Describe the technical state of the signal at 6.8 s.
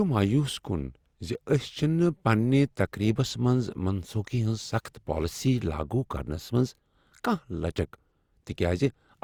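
Generation loss is present at 6.8 s and runs through the whole speech clip. The sound is swirly, hollow and smeared, with blurred attacks, which fits Opus at around 64 kbit/s, likely re-encoded about three times, each pass adding fresh quantisation noise and spectral holes on a shifted frame grid. Content still reaches 20.2 kHz.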